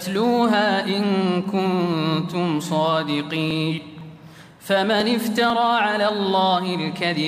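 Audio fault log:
3.51 to 5.50 s, periodic USB or driver dropouts. A small tick sounds every 0.5 s, about five in all. Each one is a tiny gap where around a millisecond of audio is skipped rather than filled with silence. Something keeps stalling the USB bus or the audio driver on a fixed schedule, so samples go missing at even intervals. The waveform then jumps across each gap. That sudden step is what produces the regular tick.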